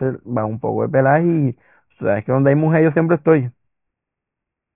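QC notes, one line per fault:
Throughout: aliasing. The speech band stops hard at 3 kHz, which points to a drop to a 6 kHz sample rate with no anti-alias filter first. Energy above 3 kHz folds back below it to unrelated frequencies, so sibilants and fricatives come out gritty and metallic, with the spectrum pressed up against the 3 kHz edge. The folded components sit roughly 35 dB under the speech.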